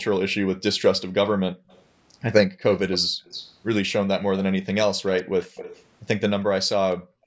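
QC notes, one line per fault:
1.55–1.68, 2.49–2.62, 3.09–3.24 and 6.99–7.26 s, background gated by the echo canceller: the room tone drops out abruptly, by about 40 dB (about 39 dB in the last one), for around a sixth of a second each time. The final one runs about twice as long and is still going when the clip ends. It's the canceller clamping the mic hard while far-end audio plays from the loudspeaker, then releasing.
1.68–1.83, 2.71–3.52 and 5.06–5.84 s, echo leak: a delayed copy of the speech sits under the main signal. The first is faint, roughly 30 dB down, trailing by 152 ms. The two longer stretches are much more present, roughly 15 dB below the speech, trailing by 225 ms. This is likely loudspeaker pickup the canceller didn't fully remove, which got sent back down the line.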